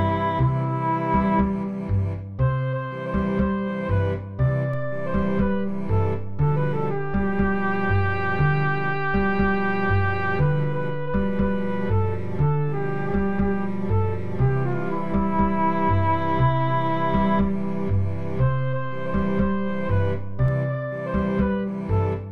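At 4.74 s there's a DC step of about -29 dBFS: the zero line jumps, giving a low thump, then holds until stepping back at 20.48 s.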